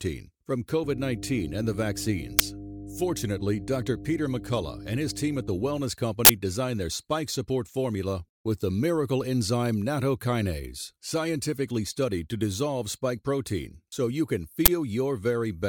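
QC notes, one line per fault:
0.84–5.82 s, mains hum: steady 50 Hz tone with low harmonics, roughly 10 dB below the speech, from power-line coupling such as a ground loop.
2.39 s, 6.25–6.29 s (before "designed their spike support"), 14.66–14.68 s (after "protein so you can"), uninitialised buffer: loud digital-noise bursts from stale memory played out, with lengths that fit 512-, 2048- and 1024-sample blocks.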